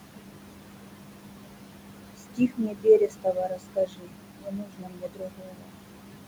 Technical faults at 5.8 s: noise suppressor artifacts; speech cut by the noise suppressor

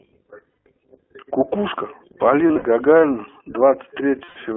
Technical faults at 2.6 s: iLBC codec; lost iLBC frames

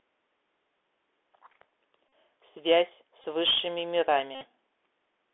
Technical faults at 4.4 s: Bluetooth CVSD headset codec; Bluetooth headset packet repeated

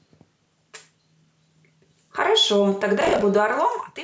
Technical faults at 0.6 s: none

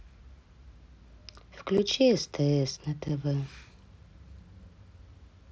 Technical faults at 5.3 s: none

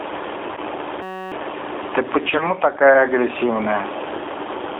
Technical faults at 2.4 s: gain pumping; G.729 codec; VoIP packet loss concealed by the speech codec

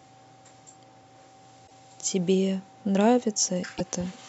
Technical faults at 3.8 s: broken MP3 bit reservoir

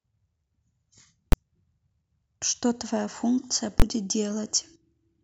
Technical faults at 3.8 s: invalid numbers at full scale

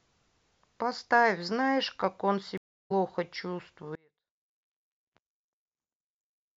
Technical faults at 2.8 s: stream reconnect

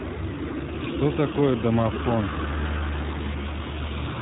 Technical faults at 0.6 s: iLBC codec

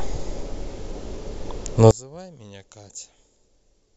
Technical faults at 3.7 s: one channel inverted

